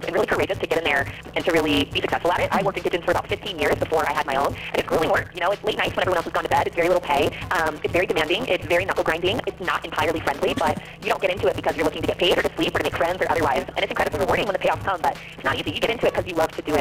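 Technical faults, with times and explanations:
Throughout, block size mismatch (truncated): block ends discarded, fitting 256-sample reads, give a 172 Hz buzz and 1.88 times speed at near-normal pitch, unlike resampling.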